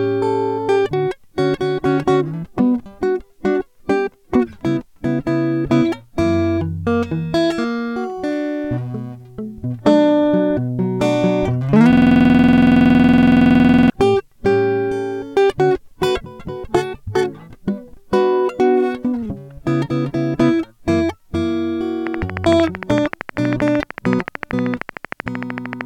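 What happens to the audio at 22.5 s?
At 22.5 s you're inside a train of clicks running from 22.07 s to 25.82 s: regular ticks at 13.1 per second, around fifty in all, poking about 15 dB above the music. Steady, identical pulses like that are most likely electrical interference.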